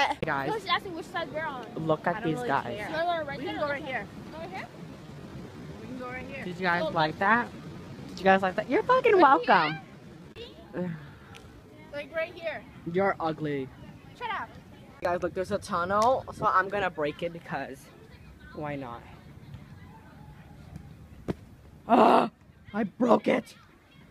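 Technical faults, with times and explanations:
4.82 to 12.26 s, time-stretched section: pace drops abruptly to about 0.73 times speed with pitch unchanged, so it drags, likely from repeated short segments.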